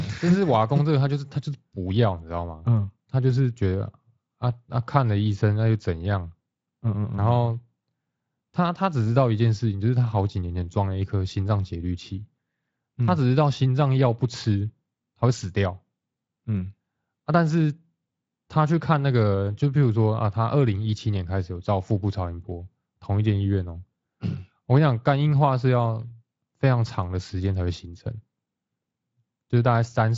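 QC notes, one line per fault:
No faults found.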